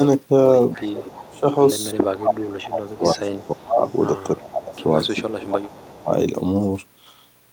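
At 0.74 s a faint delayed copy of the speech appears, an echo leak. It trails the original by 316 ms and sits about 20 dB below it. It fades at 1.4 s. The likely cause is a far end playing the call on a loudspeaker, with an echo canceller that let some of its microphone pickup through and sent it back.

From 0.76 s to 6.1 s the speech dips. This is speech suppressed in double talk. The drops reach about 25 dB and add up to about three seconds. Both sides were likely talking at once, so the canceller could not tell the talker from the echo and turned both down.

The echo returns from 2.89 s to 5.16 s, weaker, at about 25 dB down. A last short scrap comes at 5.83 to 6.02 s, about 30 dB down. Both keep the same 316 ms delay.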